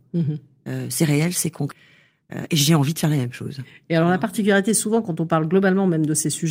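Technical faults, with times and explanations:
1.71 s, skip ahead: about a second of speech is missing and playback jumps forward with no gap, the two sides joined almost directly. Audio that was already queued was discarded, likely as the jitter buffer overflowed, cutting the delay by roughly the same second.
1.82–3.85 s, jitter buffer speed-up: speech runs at 112% of normal speed with unchanged pitch and sounds hurried. The receiver repeatedly removed pitch-period-length slices, about 0.3 s in total, to drain an overfilled jitter buffer back toward its target delay.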